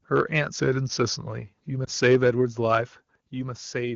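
From 0.61 to 1.22 s the speech slows by about 5.4% and drops in pitch by about 97 cents, nearly a full semitone, then snaps back to normal speed and pitch. This is most likely a drift correction step, where clock-matching software changed the playback rate in one jump to rebalance its buffer. On a spectrogram the harmonic lines shift down together as a block for that stretch and jump back up at 1.22 s. The waveform's syllables look slightly stretched.

At 1.85 to 1.89 s a single 20 ms stretch is affected by lost AMR speech frames. The decoder repeated its last good pitch and vocal tract settings at reduced gain in place of one frame that arrived damaged. This is heard as a brief dip or warble before the speech resumes. The waveform shows a short drop in amplitude, and on the spectrogram the harmonics flatten into a momentary smear. The wideband band-limit reaching up to 7 kHz stays visible throughout.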